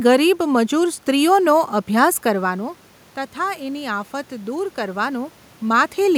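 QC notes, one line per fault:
2.30–5.90 s, automatic gain rising: after the talker moves away from the microphone around 2 s, input falls about 11 dB, and the gain control slowly adds about 5 dB, swelling voice and room noise together. The waveform envelope and spectrogram noise floor rise gradually.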